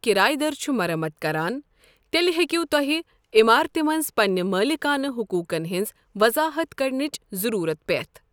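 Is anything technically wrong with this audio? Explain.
No technical faults are audible.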